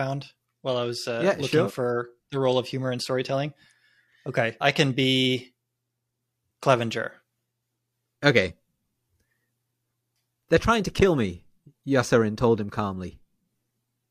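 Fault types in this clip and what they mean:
No audible faults turn up anywhere in this speech recording.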